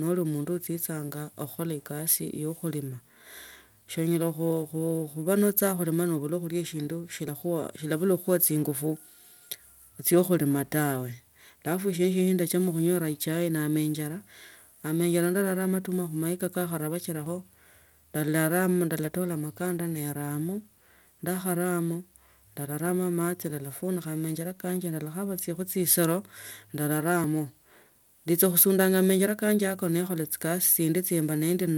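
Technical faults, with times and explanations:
7.28 s, 17.26 s and 27.24 s: audio missing between chunks. The speech skips forward abruptly three times, about ten seconds apart, each time losing a very brief slice of about 20 ms. The regular spacing points to a likely cause: audio dropped at each handover between 10-second chunks, with the two sides butted together.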